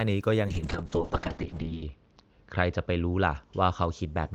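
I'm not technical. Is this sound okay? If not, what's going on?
No. From about 0.48 s to the end, there's a call bitrate drop: the connection gave the speech far less data, so it turns rough and muffled, and the crisp top end above about 8 kHz is lost. It's worst for just over a second.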